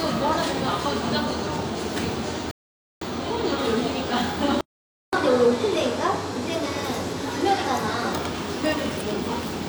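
At 2.51 s the audio drops into a rebuffering stall: the player ran out of downloaded data and waited about half a second, until 3.02 s, before carrying on exactly where it stopped. The waveform shows a flat gap and the spectrogram a blank vertical band, with nothing skipped, only 503 ms added.

A second silence, a playback stall, runs from 4.61 to 5.13 s, about 0.52 s in which the sound halts mid-flow. The likely cause is the output starving of data or its thread being blocked. On a waveform it is another flat-line gap, and on a spectrogram another empty column.

Straight after, from 5.13 to 8.13 s, comes catch-up at higher speed. The player resamples its backlog at 1.15 times normal rate, so everything runs faster and about two semitones higher before dropping back. A spectrogram shows harmonics shifted upward and events compressed closer together for those three seconds.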